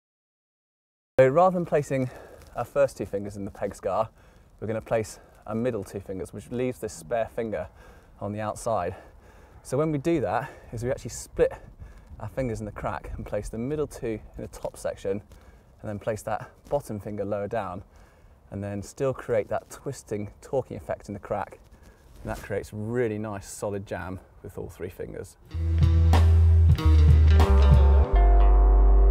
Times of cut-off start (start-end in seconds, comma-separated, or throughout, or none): 0.00-1.19